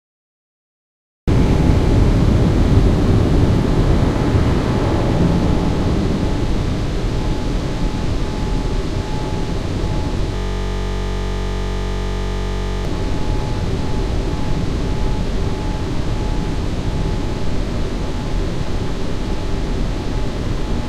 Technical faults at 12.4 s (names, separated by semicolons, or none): system hang loop